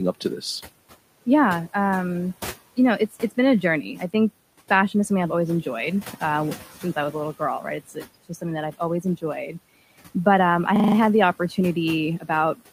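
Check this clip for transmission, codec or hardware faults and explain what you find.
Three faults are audible: noise suppressor processing across the whole clip, one moment where that suppressor clips the speech, and a brief system hang loop near the end.

Noise suppressor artifacts run throughout. The suppressor pulls the room noise down by about 17 dB between phrases, and the residue swells back under speech. Unlike steady room noise, which sits about 18 dB below the speech here, this residue pumps with the talking.

Speech cut by the noise suppressor occurs from 7.88 to 8.06 s, just after "a little girl right". The suppressor mistakes soft speech for noise and lowers it by up to about 12 dB for roughly a tenth of a second, so the sound turns faint and swallowed. It is a level dip, not a gap or a repeat.

A system hang loop occurs from 10.76 to 10.96 s, between "um I" and "had the". 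The system froze while the audio hardware kept replaying its ring buffer, so one 40 ms slice repeats exactly five times, a 25 Hz stutter. It differs from packet-loss concealment because the repeats are identical and almost no audio is lost.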